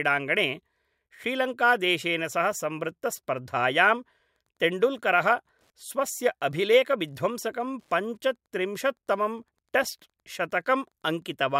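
Wi-Fi interference starts at 4.34 s, just after "सह संवृत्तस्पर्धायां", and runs to the end. A nearby Wi-Fi radio's beacon, every 102.4 ms, is rectified by the audio circuit, giving a faint ticking about ten times a second, roughly 50 dB below the speech.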